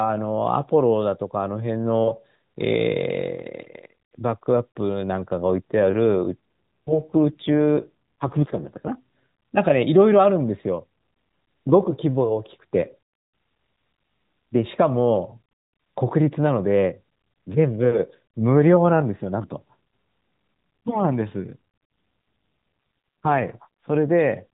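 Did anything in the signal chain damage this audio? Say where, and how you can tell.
Yes. An AMR rate drop at the network stage. From 6.04 to 8.93 s and from 21.42 to 23.88 s the speech turns buzzier and more synthetic. The bandwidth stays the same and there is no gap. This fits a weak link pushing AMR-NB from 12.2 to 5.9 kbps.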